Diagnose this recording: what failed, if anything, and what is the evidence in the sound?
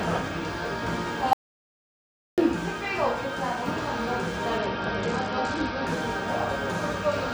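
From 1.33 s to 2.38 s the sound cuts to total silence for about 1.05 s. There is no room tone or noise floor in the gap. The sound stops mid-flow and resumes abruptly. That points to an audio dropout to silence at the input stage, likely from a lost device link or a momentary mute. The recorder kept writing silence, so everything in that second is gone.

From 4.58 s to 5.87 s the treble dulls and a gritty, granular noise rides on the sound. Both clear at 5.87 s. This is a Bluetooth SBC bit pool drop at the codec stage. The quality loss fits the bit pool falling from 31 to about 10, near 77 kbps. With so few bits, the upper sub-bands get little or nothing. The remaining bands are coarsely quantised until the link recovers.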